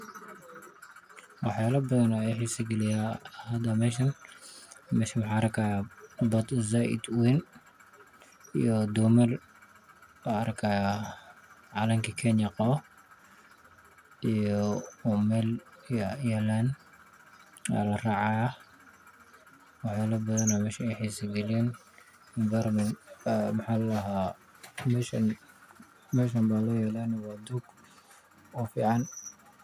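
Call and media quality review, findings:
No faults found in the speech audio; no defects heard.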